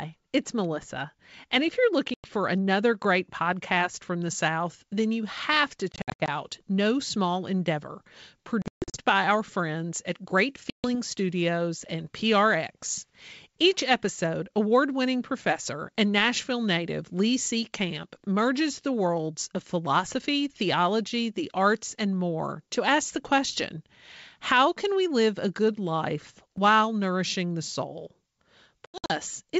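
At 2.14 s, packet loss on an ADPCM call leaves a hard-edged 100 ms silence. The decoder's predictor drifts, so the speech returns slightly distorted.

From 4.26 s to the end, pre-emphasis is left on. The treble is about 8 dB too strong at 10 kHz, which fits a CD 50/15 µs curve. The speech sounds thin and sibilant.

The same packet loss returns at 5.92–6.29 s, 8.62–9.01 s, 10.70–10.95 s and 28.86–29.13 s. Each loses 140 to 260 ms, in scattered dropouts except at 10.70 s.

At 26.58 s, chunks are out of order. One 5.33 ms slice plays a chunk late, giving a brief jumbled moment.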